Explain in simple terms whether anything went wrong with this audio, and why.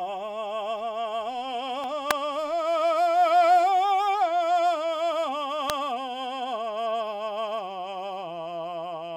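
A nearby switch, motor or static discharge likely threw off a tiny electrical arc that leaked into the audio line. This is an electrical switching spike, and it happens twice in this music, at 2.11 s and again at 5.70 s. Each one is extremely brief, far shorter than any note, but fairly loud, so it lands on top of the music as a sharp, dry snap.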